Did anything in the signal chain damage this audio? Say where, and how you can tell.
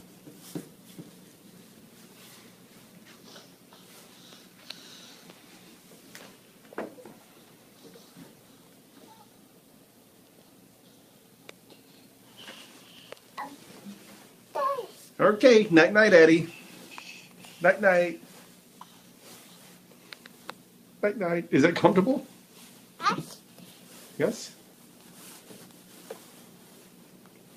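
No, nothing in the signal chain damaged this audio that I can hear.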